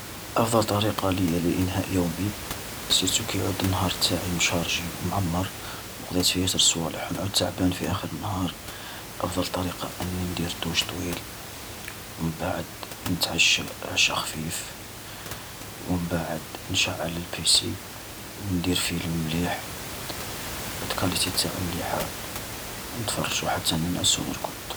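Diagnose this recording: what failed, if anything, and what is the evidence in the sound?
Nothing failed at any stage of this speech recording; the only thing under the talker is room noise picked up by the microphone, sitting about 10 dB below the speech, which belongs to the acoustic environment rather than the signal chain.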